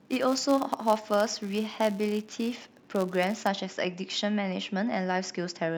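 From 0.00 to 3.49 s the speech carries a filter restarted on every block: the filter loses its state at each block boundary and starts from silence, so each block opens with a small transient. The result is a 172 Hz buzz, consistent with 256-sample blocks, whose loudness follows the speech level.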